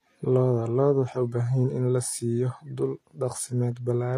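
From start to finish the speech has a gritty, plainly metallic treble, and s sounds come out lispy. The likely cause is HE-AAC compression at a low bitrate, plausibly around 24 kbps: the upper band is not the original but lower bands copied upward and loosely shaped, so its harmonics fail to line up with those below. On a spectrogram the treble looks blocky and repeated, ending sharply at 14.9 kHz.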